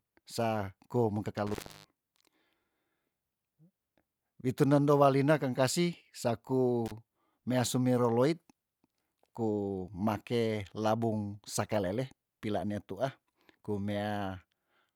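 Speech with an intermittent contact fault: a loose connection briefly opens at 1.47–1.89 s, dropping sound for about 295 ms, and again at 6.86–6.92 s for about 37 ms just before "mea sumero loit". Each dropout has crackle at its edges and faint hiss underneath.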